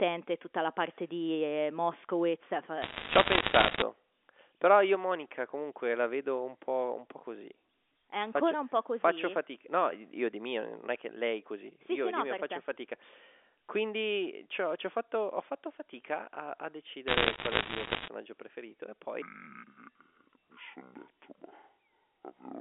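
A speech recording heard through a telephone-band channel, with G.711 A-law coding limiting it to roughly 300 Hz to 3.5 kHz. It has three kinds of fault. First, the level drops suddenly twice: a slight dip of about 1 dB at 2.37 s, then a clearer fall of about 4 dB at 4.95 s. Voice and background shrink together in a single step rather than fading, so the change is in the input gain rather than in the talker. The likely cause is a microphone volume stepped down by the calling software after it judged the input too hot. Second, bursts of sharp ticks and crackle sit over otherwise intact speech from 2.82 to 3.82 s, and again from 17.08 to 18.08 s, between "fatto fatica a a" and "preferito e". This is the sound of bit errors on a digital phone line. The error rate is around a couple of percent. Each flipped bit corrupts one logarithmic sample, and hits on the sign or high-order bits throw that sample far off, producing the clicks. 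Third, from 19.22 s to the end, after "preferito e" and up to "la risposta", the audio turns deep and dragging. It plays at 0.542 times normal speed, which lowers pitch by roughly ten semitones while stretching every syllable. This is a section at the wrong speed, where speed and pitch move together. It was most likely played back against a mismatched clock.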